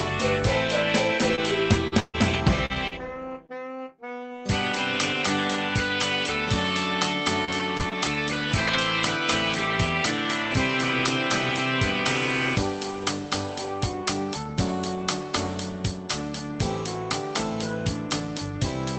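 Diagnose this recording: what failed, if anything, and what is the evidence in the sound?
Repeated packet loss (robotic sound), a network fault, runs from 1.35 to 3.51 s: six holes, the longest 139 ms, patched by stretching the last sound, giving a choppy texture with pieces missing.

Scattered short gaps, also network, fall between 7.45 and 8.75 s: about three brief holes of roughly 30 ms or less, with mostly clear audio between them rather than continuous robotic smearing.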